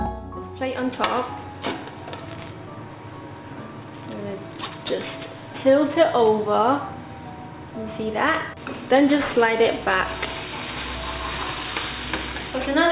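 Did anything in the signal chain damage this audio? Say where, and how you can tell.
Yes. Throughout, high sounds turn gritty and metallic, with stray tones that don't belong and a spectrum packed hard up to a 4 kHz edge. This is aliasing from a sample-rate conversion that fits a drop to 8 kHz without an anti-alias filter, folding content around 4 kHz back into fairly loud, false tones.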